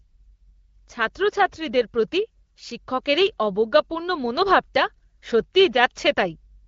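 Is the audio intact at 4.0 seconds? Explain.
Yes, the speech at 4.0 seconds is intact, with no fault at that moment; it carries only the AMR wideband (HD Voice) coding of the whole clip, running at 12.65 kbit/s.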